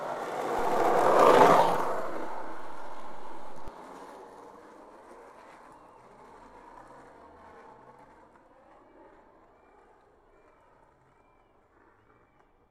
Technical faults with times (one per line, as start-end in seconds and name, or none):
0.59-3.68 DC step